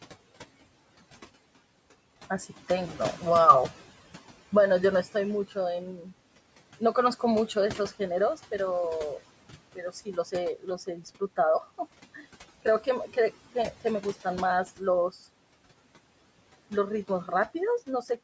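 Noise suppressor artifacts run through the whole clip. The suppressor estimates the room noise, which sits about 20 dB below the speech, and pulls it down by about 17 dB frame by frame, so the background dips in pauses and returns under speech. This pumping of the noise floor, rather than any loss of speech, sets it apart from the cuts that follow.

Speech cut by the noise suppressor occurs from 9.76 to 10.33 s, dropping up to about 13 dB, and again from 10.56 to 11.38 s, up to about 15 dB. In each span a few hundred milliseconds of soft speech were mistaken for noise and swallowed. Unlike the background pumping, the speech itself goes faint here.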